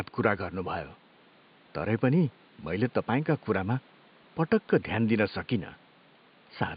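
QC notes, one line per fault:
No faults found; the room noise sits about 31 dB below the speech.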